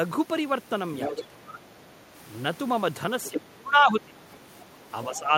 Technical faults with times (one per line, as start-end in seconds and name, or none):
1.02-1.24 other side's voice leaking through
1.08-2.11 speech suppressed in double talk
3.23-3.41 other side's voice leaking through
3.31-4.23 speech suppressed in double talk
4.32-4.65 other side's voice leaking through
5.08-5.33 speech suppressed in double talk
5.14-5.19 other side's voice leaking through